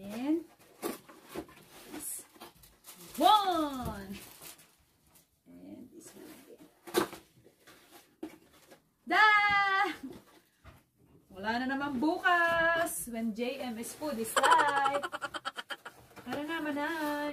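No technical faults can be heard anywhere in the recording.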